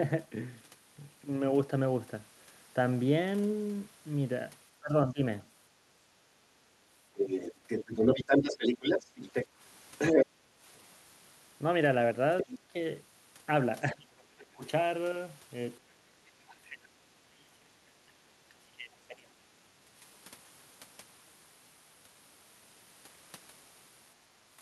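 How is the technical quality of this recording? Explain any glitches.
The recording has clear echo-canceller problems: the talker's speech is repeatedly pushed down during overlapping talk, a second voice leaks through, and the room sound is briefly gated.

Speech suppressed in double talk occurs at 4.80–5.22 s, 12.43–12.75 s, 13.91–14.64 s and 16.41–19.90 s. The likely cause is the canceller failing to tell the local talker from loudspeaker echo while both sides spoke, so it attenuated everything. The speech sinks by roughly 20 to 30 dB. The last episode is the longest, affecting about three seconds.

The other side's voice leaks through from 7.14 to 10.26 s, at roughly the same level as the talker, and again briefly at 12.38–12.56 s, somewhat quieter at about 5 dB below the speech. This is likely loudspeaker playback reaching the microphone and not being fully cancelled. A second voice is plainly audible under and alongside the main one.

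Background gated by the echo canceller happens at 10.26–10.61 s, right as the long leak ends. The canceller clamped the microphone while the loudspeaker was active, so the room tone dips by about 10 dB for roughly 0.4 s and then recovers.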